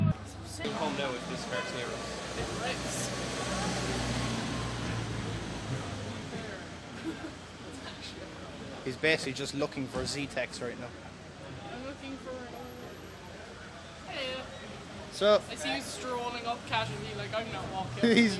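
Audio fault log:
No fault can be heard anywhere in this clip. Nothing in the audio calls for a timed entry in this log.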